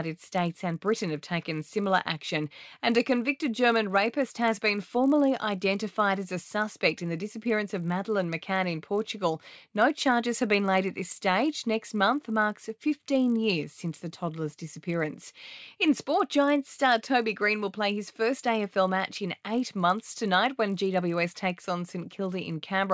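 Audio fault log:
Throughout: resampler restarted on every block. A steady 50 Hz buzz rides under the speech and drops away in pauses. The sample-rate conversion, which sounds like a step down from 24 kHz to 16 kHz, was run afresh on each 20 ms block. So at every block boundary the converter lacked the true neighbouring samples and left a small error there. Those errors fall every 20 ms, fusing into a buzz that follows the signal.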